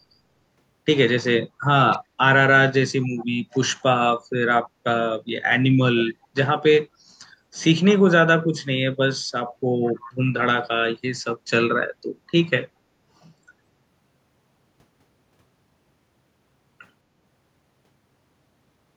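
Around 1.94 to 1.98 s, 3.02 to 3.26 s, 3.52 to 3.59 s and 9.85 to 10.13 s there's faint echo leak: a quiet copy of the speech trailing 212 ms behind, likely from a loudspeaker echo canceller letting some of its own playback back through.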